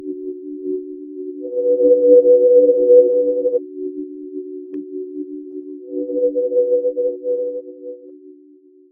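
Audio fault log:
Throughout, noise suppressor applied to music or sounds: attacks come through but held parts and tails sink, so the sound pumps, flutters or thins out, with level swings of about 15 dB. A speech-tuned suppressor mistakes steady tones, ambience and reverb for noise.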